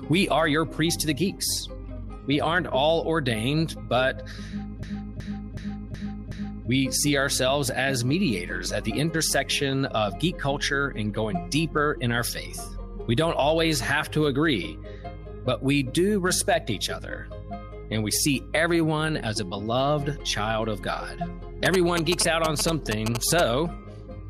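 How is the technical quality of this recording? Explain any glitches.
Two glitches affect the recording. From 4.83 to 6.69 s, a system hang loop repeats one 0.37 s piece five times at 2.69 Hz (fitting a 16384-sample buffer), a stutter seen as identical repeating waveform blocks. From 21.66 to 23.41 s, GSM signalling bursts from a nearby 2G phone, rectified by the circuitry, give galloping ticks and 217 Hz buzz, roughly as loud as the sound, shown as vertical spectrogram stripes.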